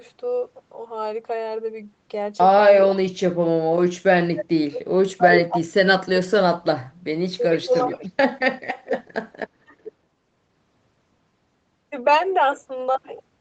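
Speech recorded over a call, band-limited to 8 kHz, with five bursts of echo leak at 2.81–2.99 s, 5.34–5.40 s, 7.52–8.09 s, 8.87–9.12 s and 9.84–9.92 s. Each is a delayed copy of the far-end speech, trailing by 420 to 438 ms. The copy sits about 15 dB below the speech in the first and third bursts, about 5 dB below in the second and fourth, and about 20 dB below in the last. That consistent delay points to an echo canceller on a loudspeaker endpoint failing to fully subtract its microphone pickup and sending the residue back.

Speech suppressed in double talk appears from 2.89 to 6.87 s, where the talker repeatedly dips or drops out, roughly two seconds in total, by up to about 40 dB. Shorter dips follow at 7.63–8.02 s, about 15 dB, and 9.36–9.75 s, about 25 dB. The first two overlap echo bursts, likely because the canceller could not tell near-end speech from loudspeaker echo during overlapping talk and attenuated both.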